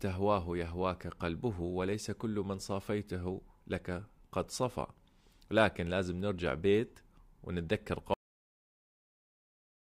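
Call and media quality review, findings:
Cut-off end at 8.14 s: speech stops mid-sound, drops straight to digital silence, no decay. Capture or playback path never wrote the final buffers.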